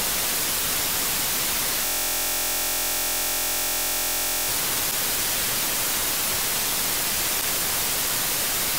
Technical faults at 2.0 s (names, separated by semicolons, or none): system hang loop